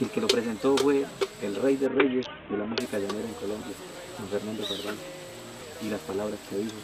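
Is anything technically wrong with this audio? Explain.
Yes. A Bluetooth SBC bit pool drop runs from about 1.86 to 2.80 s. Under link congestion the encoder sharply cut its bit allowance, which fits a fall in bit pool from 28 to about 5, near 54 kbps. With so few bits the upper sub-bands get little or nothing and the remaining bands are coarsely quantised. For just under a second the treble goes dull and a gritty, grainy noise rises, clearing when the rate recovers.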